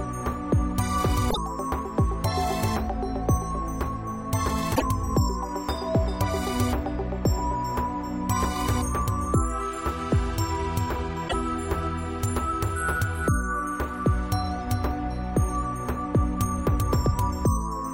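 Damaged data in a compressed stream breaks the sound three times: at 1.27 to 1.38 s, 4.72 to 4.82 s, and 11.25 to 11.34 s, each about a tenth of a second. Corrupted bytes make the decoder misread frames and hunt for the next valid header, producing a short chirp or squawk. On a spectrogram each appears as a narrow vertical smear of unrelated energy; the waveform shows an abrupt discontinuity at both edges.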